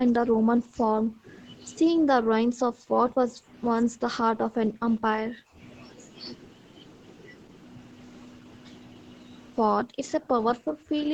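Speech suppressed in double talk at 0.0–0.77, 0.95–1.27, 3.81–4.05, 4.23–5.58, 9.77–10.0 and 10.18–11.13 s: the speech sinks by about 20 to 40 dB or breaks up in pieces, likely because the echo canceller mistook overlapping talk for loudspeaker echo and turned both down.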